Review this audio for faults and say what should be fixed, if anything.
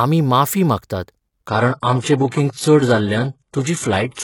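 At 1.48 s the speech abruptly loses quality and stays degraded to the end. Nothing is audible above 11.4 kHz, the top end turns thin, and codec smearing rises, with no gap at the switch. That's an adaptive stream at a lower bitrate: the player dropped to a cheaper rendition when throughput sagged, which fits a step down from a 96 kbit/s AAC-LC stream to a 12 kbit/s HE-AAC one. To prevent it, give the player a bigger buffer or a higher floor on its bitrate ladder.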